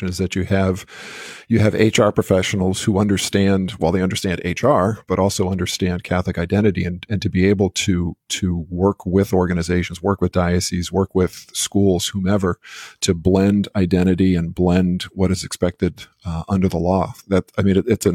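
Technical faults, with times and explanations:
2.28 s, gap between stream segments: a hard-edged hole of about 3.1 ms cuts into the speech where two 2.0 s segments meet. Their time stamps leave a small gap, which the player fills with silence, so nothing is lost but the sound briefly drops out.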